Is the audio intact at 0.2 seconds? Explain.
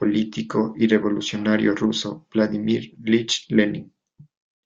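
Yes, the audio is intact at 0.2 seconds, with no audible fault at that moment.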